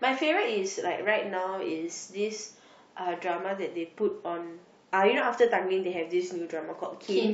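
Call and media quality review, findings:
Nothing to flag on this speech recording; no dropouts, glitches or other transport or processing trouble turned up anywhere in it.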